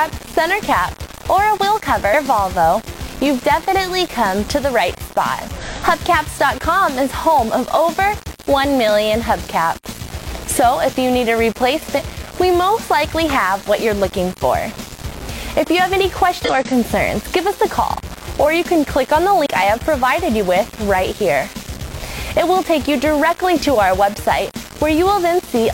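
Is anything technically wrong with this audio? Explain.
Yes. Throughout, the sound carries a grainy distortion that tracks the signal, only about 15 dB down, likely low bit depth without dither, plain rounding consistent with roughly 5 bits.

Damaged data in a compressed stream causes five short glitches at 2.09–2.15, 5.58–5.63, 11.94–12.00, 16.44–16.50 and 19.42–19.46 s, where the decoder misreads corrupt frames and resyncs.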